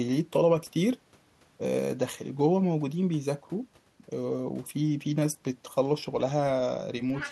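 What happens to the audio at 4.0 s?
At 4.0 s the speech runs on without any audible fault: no dropout, click, distortion or glitch interrupts it at that moment.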